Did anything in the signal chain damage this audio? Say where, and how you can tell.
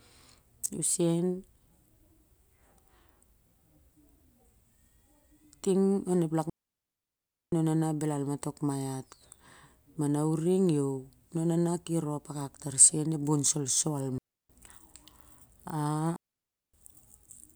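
Yes: a digital wireless dropout on the radio link. The receiver lost too much data and muted, leaving clean, near-silent holes from 6.50 to 7.52 s (just before "na naw"), 14.18 to 14.50 s and 16.16 to 16.74 s, with no noise burst at either edge.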